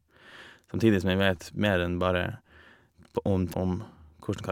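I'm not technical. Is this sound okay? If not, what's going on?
No. At 3.53 s there is a CD skip. The disc player lost its place on the disc for a moment. You hear a tiny tick and a very brief silence. Then the speech carries on from a slightly different spot.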